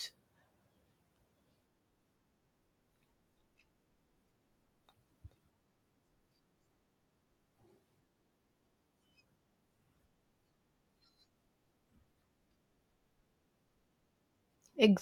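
No technical faults can be heard anywhere in the recording.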